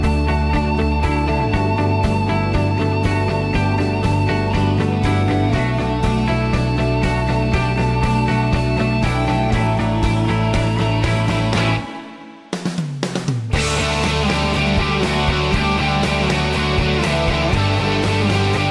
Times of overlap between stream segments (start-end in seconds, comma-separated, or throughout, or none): none